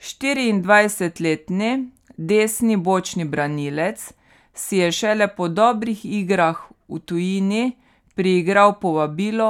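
A speech recording with no technical faults to report. Nothing in the audio points to a problem anywhere in how it was captured or delivered.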